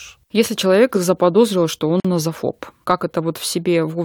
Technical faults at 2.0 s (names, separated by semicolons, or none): gap at a join of encoded pieces